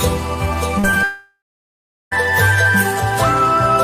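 The audio has two short concealed packet losses, at 0.79 to 0.85 s and 0.91 to 0.94 s, where about 40 ms and 20 ms went missing and were patched by extending the preceding sound. Each is heard as a brief smear or wobble and shows on a spectrogram as a smoothed, repeated stretch with blurred edges. From 1.03 to 2.13 s comes a long network dropout, likely caused by about a second of audio never arriving. A fading buzz or hiss continues the last sound before roughly 0.74 s of silence, which shows as a flat waveform and a blank spectrogram band until the signal resumes.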